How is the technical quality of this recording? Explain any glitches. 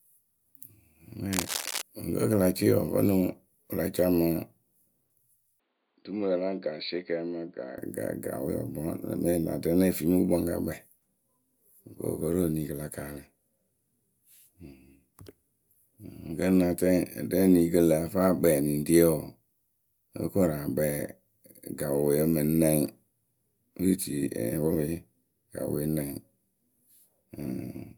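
The recording has two clear glitches, both early on.

From 1.33 to 1.82 s there's a burst of cable scratch noise: a dense, uneven scratching and rustling laid over the speech, only a little quieter than the speech itself. The likely cause is a worn cable or connector getting moved. Its contact resistance jumps around rapidly while it shifts, and that fluctuation comes through as a half-second of crackly grit.

Then from 5.60 to 7.78 s it sounds like the input switched to a poorer device. The speech suddenly goes dull and boxy, with nothing above 4.8 kHz. It drops roughly 10 dB in level and picks up a faint new noise floor of its own. There's no gap at the switch, so the change is instant. The likely explanation is the system jumping to another mic or a headset's call profile, which passes a narrower band, before it comes back.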